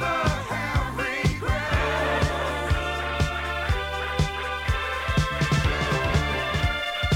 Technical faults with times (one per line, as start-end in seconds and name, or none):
4.73-7.15 doubled audio track